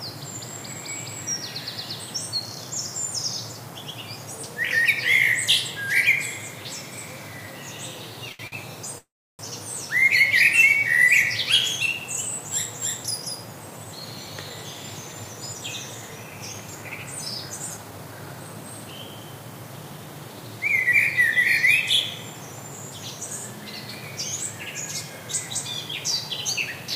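Two packets arrived late and the jitter buffer ran dry each time, giving a short stall from a late packet at 8.32 to 8.41 s and again at 8.47 to 8.54 s. The receiver held the last bit of sound for 69 ms and then 50 ms until the data came in and resumed from the same point, so nothing is lost. The sound simply hangs for a moment with a slight buzz or dip, twice in quick succession.

At 8.98 s comes a call audio freeze lasting until 9.41 s, likely caused by packets being held up in transit so the buffer emptied again. The last sound is stretched into a fading buzz or hiss that gives way to about 310 ms of silence, and the audio then picks up where it stopped. A gap of roughly 0.4 s is inserted, with nothing actually missing.

Later the jitter buffer was holding more audio than its target, and it trimmed the excess by removing short pitch-period slices over and over. This jitter buffer speed-up runs from 13.57 to 17.06 s at 107% speed, shedding about 0.3 s, and again from 17.46 to 18.55 s at 111%, shedding about 0.15 s. 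The sound plays faster at unchanged pitch and feels rushed, faster still in the second stretch.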